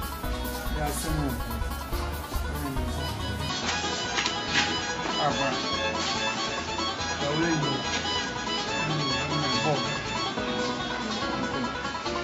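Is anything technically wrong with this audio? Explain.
Yes. From 3.49 s onward the sound turns dull, cut off above 7.6 kHz, with faint added noise: the input likely switched to a poorer device.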